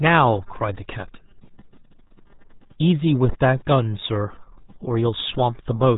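From start to finish the speech carries RealAudio 14.4 codec damage: nothing passes above 3.8 kHz, and heavy coding leaves it muffled and gargly, which fits an 8 kbit/s dial-up codec. Unlike a plain low-pass or telephone band, the gargle shows bitrate starvation, not just filtering.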